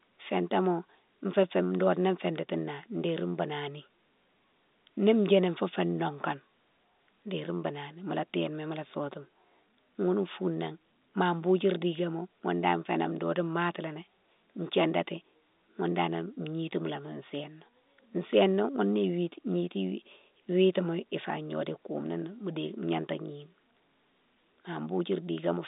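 No technical faults can be heard in the speech; it carries the narrow band of an ordinary telephone line, running from about 200 Hz up to 3.7 kHz, consistent with G.711 telephone coding working as intended.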